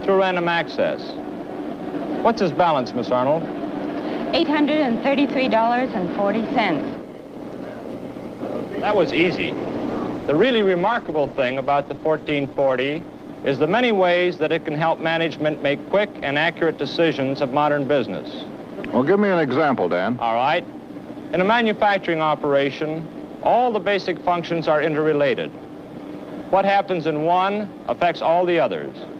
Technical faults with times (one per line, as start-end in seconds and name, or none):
8.85-14.27 call bitrate drop